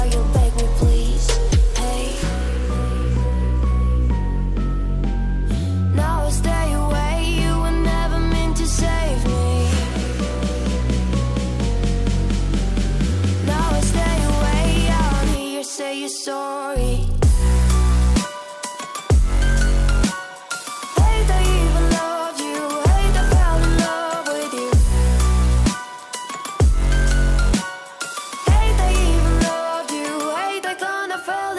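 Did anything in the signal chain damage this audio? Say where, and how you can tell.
Yes. From 28.06 s to the end there's a steady 100 Hz buzz riding on the signal, which points to the resampler restarting on every block in the sample-rate conversion stage. Each 10 ms block gets converted in isolation, so the filter sees silence or wrapped samples at the edges instead of real neighbours. That leaves a small glitch every block, and the buzz only shows up when there's signal. It fits a 48 kHz to 24 kHz conversion.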